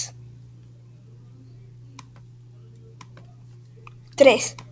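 No technical faults are audible.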